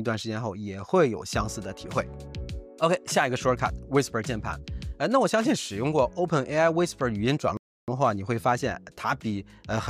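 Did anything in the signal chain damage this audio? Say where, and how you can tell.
Yes, there's a rebuffering stall in the playback stage. At 7.57 s the sound drops to dead silence and stays there until 7.88 s, then picks up exactly where it left off. Nothing's missing on either side of the gap; the clip just gets about 0.31 s longer. That's the player draining its buffer of downloaded audio, halting output, and waiting for more data to arrive before carrying on.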